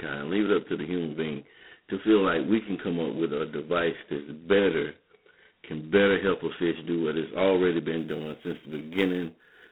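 From the first moment, the speech has that narrow telephone sound of G.726 ADPCM, and at a heavy level. The line band sits at roughly 150 Hz to 3.5 kHz, with nothing at all above about 3.9 kHz. The codec sends only a coarse difference from its own prediction of each sample, and with this few bits the prediction error turns into a harsh, rasping hiss that rides up and down with the speech level. That grit points to the 16 kbit/s mode, two bits a sample.

At 7.98 s a second fault comes in on top and runs to the end of the clip: sample clock jitter. The converter's clock is wobbling by something on the order of a few microseconds, so each sample is taken a touch early or late. Where the waveform is changing fast, that timing slip becomes an amplitude error, sitting around 35 dB below the signal. You hear it as an extra fizzy roughness that swells on louder, brighter stretches of speech and drops away in the gaps.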